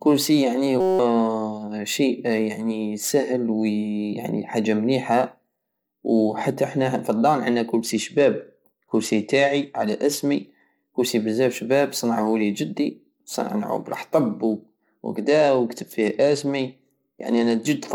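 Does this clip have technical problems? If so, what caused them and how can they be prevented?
Yes. A system hang loop occurs from 0.81 to 0.99 s: a 5.33 ms slice repeats 35 times at 188 Hz, which fits a 256-sample buffer, and roughly 200 ms of audio is lost. Unlike a dropout, which goes silent, the exact repetition forms a steady pitched buzz. Preventing it means fixing the driver or system stall so the hardware never replays a stale buffer.

A Bluetooth SBC bit pool drop dulls the treble and adds gritty noise from 7.80 to 10.66 s, beginning after "زحتا حنا فالدار عندنا" and ending before "كرسي بزاف شباب صنعهولي", and again from 15.16 to 17.67 s. The sound fits the bit pool falling from 31 to 13, about 94 kbps. A plain low-pass filter would lose treble without the grit, and this quality recovers. Keeping the link uncongested, with the phone close and less 2.4 GHz traffic, prevents it.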